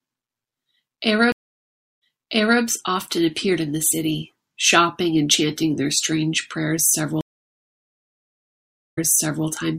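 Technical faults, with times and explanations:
1.32–2.61 s and 7.21–9.47 s, stream reconnect: the connection dropped twice and the player restarted its decoder mid-stream. The sound goes silent for 0.69 s, then 1.76 s, and resumes 0.6 s and 0.5 s earlier, repeating audio the server resent.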